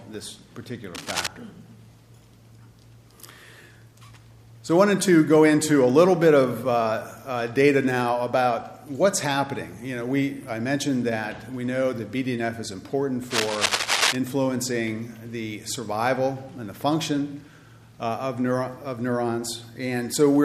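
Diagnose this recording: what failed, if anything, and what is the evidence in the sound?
Analogue wiring: cable scratch noise. Ragged, scratchy bursts sit over the sound from 0.95 to 1.27 s, a little below its level, then from 13.3 to 14.16 s at roughly equal level. Likely a worn cable or connector being moved, its contact resistance jumping erratically.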